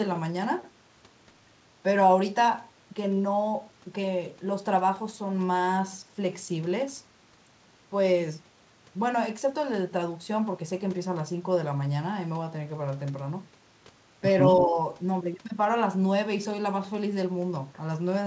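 Echo leak, from 14.49 to 14.64 s: a faint, delayed copy of the speech comes back about 191 ms behind the original, sitting roughly 10 dB below it. The likely cause is a far end playing the call over a loudspeaker, where the echo canceller failed to strip out everything its microphone picked up, so a short scrap of the returned signal slips through and is heard as a brief ghost trailing the talker.

Speech suppressed in double talk, from 14.66 to 14.77 s: immediately after the echo, the speech level dips by around 5 dB for about a tenth of a second. The likely cause is the echo canceller mistaking the overlap of local speech and loudspeaker echo for echo alone, and pulling down both together, so the talker briefly sounds ducked. Across the whole clip, the call path's band limit leaves nothing above 8 kHz, which fits a wideband codec such as G.722.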